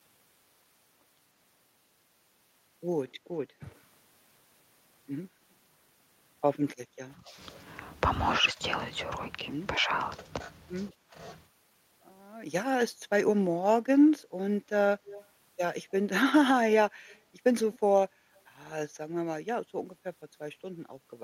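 From 7.17 to 7.37 s, 8.41 to 8.59 s, 9.78 to 9.90 s and 10.92 to 11.15 s, the speech dips by roughly 10 dB, nearer 15 dB in the last, in brief chunks. This is speech suppressed in double talk, likely an echo canceller ducking the talker while the far side spoke.

At 15.06 to 15.26 s, 17.08 to 17.19 s and 17.73 to 17.79 s, a faint copy of the speech trails by 157 ms, about 20, 35 and 30 dB below it. This is echo leak, likely loudspeaker pickup the far-end canceller failed to remove.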